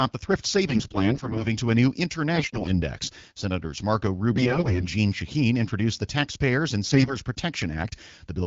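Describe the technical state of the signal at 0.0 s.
At 0.0 s the speech is intact, with no fault, and it carries the light coloration of AMR wideband (HD Voice) coding at 12.65 kbit/s.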